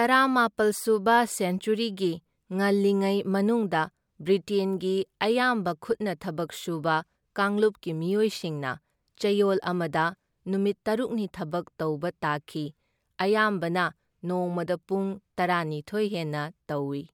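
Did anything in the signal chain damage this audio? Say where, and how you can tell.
No, nothing damaged this audio.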